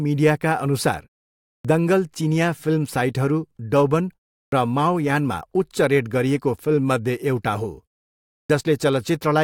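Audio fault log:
1.61–1.65, 4.48–4.52 and 8.46–8.50 s, clipped start after a pause: after gaps of 0.61, 0.38 and 0.67 s, the output device wakes late and swallows about 37, 43 and 36 ms of onset, first before "दङ्गल चिनियाँ फिल्म". The waveform jumps from flat silence straight to full amplitude, and the spectrogram shows hard vertical edges with the onset energy missing.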